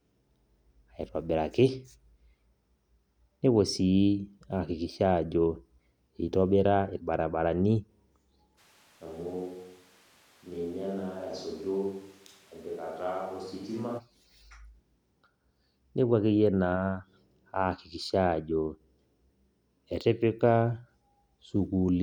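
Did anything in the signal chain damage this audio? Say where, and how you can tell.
Yes. At the capture stage, the close microphone's feed likely dropped out from 8.6 s to 14.0 s, leaving a switch to a distant microphone. Both transitions are abrupt. The speech suddenly turns hollow and roomy, loses its low end, and falls by roughly 10 dB, while room noise rises to sit only about 25 dB beneath it. From farther away, reflections outweigh the direct sound and the proximity bass boost disappears, which explains the thin, reverberant tone.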